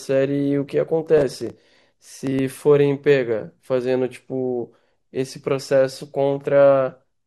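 From 1.18 to 2.39 s the speech carries processor overload crackle: dozens of tiny buffers, under a millisecond each, arrive late and are skipped, producing gritty tearing.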